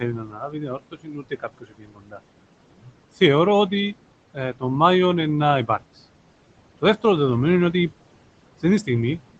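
Speech recorded over a call, with noise suppressor artifacts running through the whole clip. The room noise, which sits about 15 dB below the speech, gets pulled down by about 18 dB in the gaps and comes back underneath the talking. The speech itself is cut by the noise suppressor in two places. From 0.0 to 2.2 s, the suppressor treats parts of the speech as noise and turns them down with the background, by as much as about 19 dB. That affects roughly a second and a half of that stretch, so the quieter syllables and word endings sound swallowed. A shorter drop of about 18 dB runs from 2.71 to 2.96 s and leaves that brief portion faint. Throughout, the sound tops out at 8 kHz, which fits the call codec's bandwidth.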